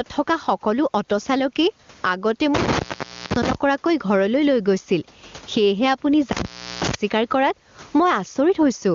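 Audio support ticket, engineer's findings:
Gain pumping throughout: swing around 20 dB, dynamics flattened. Likely input gain set far too high with a fast limiter or compressor clamping level on every peak and releasing in gaps.

Intermittent contact at 2.55–3.55 s and 6.32–6.95 s: crackle, then dropout with faint hiss for about 0.52 s and 0.37 s. Probable loose cable or connector briefly opening the signal path; room noise stays low beneath speech.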